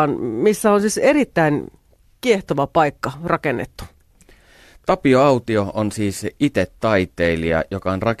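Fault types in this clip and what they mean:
No technical faults can be heard in the speech signal.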